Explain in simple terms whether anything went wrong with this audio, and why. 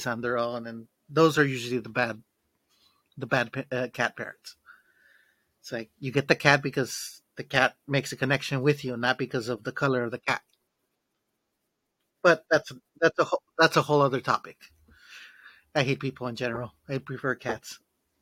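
Nothing went wrong with this speech recording: the signal stays steady and continuous the whole way, with no technical problems to be heard anywhere in it.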